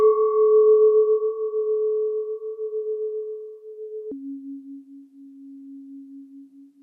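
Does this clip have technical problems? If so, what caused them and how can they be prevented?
Yes. From 4.12 s to the end at 6.83 s there's a section at the wrong speed. The audio suddenly drops to about 0.64 times its proper rate, so everything turns slow and heavy, and the pitch falls with it by roughly seven semitones. Speed and pitch moving together like that likely means this stretch was played or rendered against the wrong clock, possibly a sample-rate mismatch on that part of the edit. To prevent it, keep every segment at the project's sample rate and check the playback speed before bouncing the final file.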